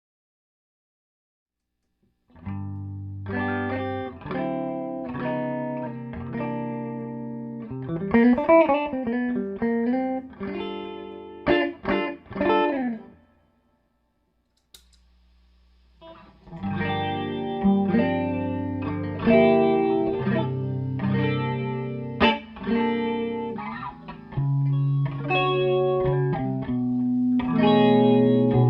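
Nothing goes wrong anywhere in the clip, with no glitches, dropouts or other technical faults to be heard at any point.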